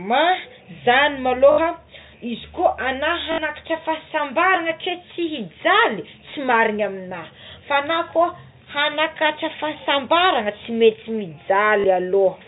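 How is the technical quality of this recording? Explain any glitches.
The recording has three short dropouts, heard through a telephone-band sound that stops at 4 kHz. The fault is packet loss with the last packet repeated. It occurs at 1.52 to 1.58 s, at 3.32 to 3.38 s just before "fahasambarana ke", and at 11.80 to 11.84 s. The receiver replays the last audio chunk to fill each gap. The gaps last 60 ms, 60 ms and 40 ms, which fits 20 ms packets. Each gap sounds like a brief robotic stutter, with a 50 Hz buzz.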